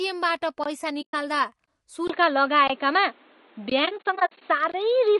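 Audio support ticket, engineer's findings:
Low-delay AAC compression throughout: speech rough and grainy, noise between harmonics. Spectrogram shows smeared harmonics, sparse patchy top band. Likely AAC-ELD at a low rate, consistent with roughly 32 kbps.

Gap between chunks: hard-edged 20 ms holes at 0.64, 1.66, 2.68, 3.70 and 4.72 s, 1.02 s apart. Waveform shows flat silent runs with abrupt edges. Chunked transport leaving silence at each join.

AAC frame loss with muting: soft-edged dropout 1.01 to 1.14 s, about 120 ms. Then 3.85 to 4.42 s, 240 ms muted in scattered bursts, longest about 70 ms. Waveform shows tapered fade-out and fade-in. Spectrogram shows full-band blank columns. Decoder zeroing lost frames, overlapping windows smoothing the edges.

Input switched to a poorer device at 2.08 s: 20 ms silence, then dull boxy sound, level shifted by roughly 5 dB, new noise floor about 35 dB below the signal. 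Spectrogram shows a hard ceiling at 4.4 kHz to the end. Likely a headset call profile or a lesser microphone taking over.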